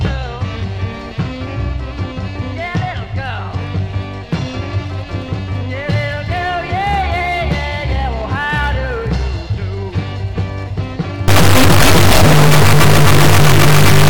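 From 11.28 s to the end, an integer read as float fault: the sound becomes a harsh, extremely loud buzzing square wave, which fits 32-bit integer samples being interpreted as 32-bit floats. Most values come out near zero or far past full scale, so the output jumps between silence and hard clipping.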